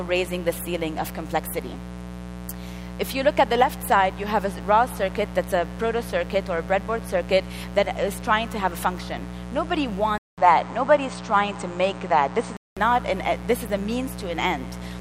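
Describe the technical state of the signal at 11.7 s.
At 11.7 s you're inside a stretch, from 10.18 to 12.77 s, where the input has likely been switched to a poorer device, something like a fallback mic or a headset's call profile. It opens with a short gap of about 200 ms, then the sound turns duller and boxier because nothing gets through above 8.8 kHz. The level shifts by a few dB, and the new device brings its own faint noise floor, sitting well down under the signal.

Under all of that there's mains buzz, which runs through the whole clip, including this moment. Spiky switching interference tied to the 60 Hz supply throws off a stack of harmonics that climb well into the kilohertz range. You hear it as a steady, raspy buzz that isn't far below the wanted sound, so it stays plainly audible the entire time.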